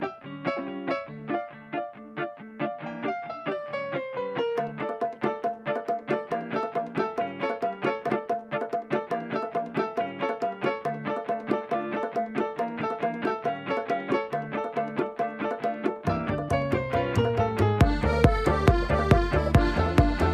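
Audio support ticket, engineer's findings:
Skip ahead at 8.09 to 8.11 s. Playback jumps forward with no gap fill. Around 0.7 s of audio is missing, with both sides joined almost directly. Probable component: jitter buffer, which likely discarded queued audio on overflow and cut the delay by about that amount.

Jitter buffer speed-up from 8.19 to 9.07 s. Audio runs at 108% speed with pitch unchanged and sounds hurried. The buffer was still over target, so short pitch-period pieces were trimmed repeatedly, removing about 70 ms in total.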